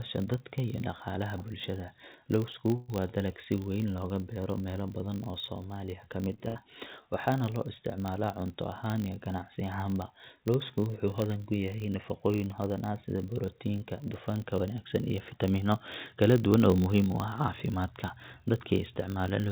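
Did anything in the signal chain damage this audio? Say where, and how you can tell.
Yes. A filter restarted on every block, somewhere in the driver or buffer stage, puts a 50 Hz buzz through the whole clip. Each 20 ms block starts from a cleared state and leaves a small tick. Unlike mains hum, the buzz rises and falls with the speech level.

At 2.76 to 2.90 s, just before "waa dalag si weyn", there is a call audio freeze in the network and jitter-buffer stage. About 122 ms of fading continuation fills the gap and nothing is lost afterwards. That points to late packets, likely, rather than a dropout, which would cut speech out.

Two jitter buffer speed-ups occur in call processing, at 15.18 to 15.73 s (111%) and 16.15 to 16.85 s (110%). Each trims roughly 70 ms in pitch-period pieces. The speech sounds hurried while pitch holds steady, which distinguishes this from a resampling error. The G.711 path's cut above 4 kHz is its normal band limit.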